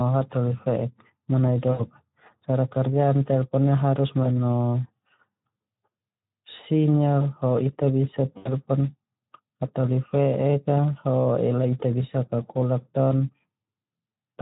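The Speex codec colours the whole clip: the hoarse, noisy texture of the speech fits a low-to-middle Speex setting of around 11 kbps, where too few bits go to the excitation signal and codec damage is plainly audible.

VoIP packet loss concealed by the speech codec occurs three times. At 1.71 to 1.81 s, after "hataholi fe'ek manai", about 80 ms of audio goes missing. At 4.23 to 4.27 s, after "kerja telpon ia haeus", about 20 ms drops out. At 8.37 to 8.49 s, another gap of about 80 ms occurs. Each time, the decoder extends its last pitch and filter with falling gain, so the gap is filled with a fading buzzy tone or coloured noise rather than silence.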